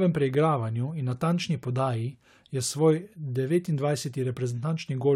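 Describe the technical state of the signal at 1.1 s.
An electrical switching spike at 1.12 s, likely a nearby switch or discharge arcing into the line, adds a sharp snap or tight cluster of clicks over the speech, peaking modestly around -30 dBFS.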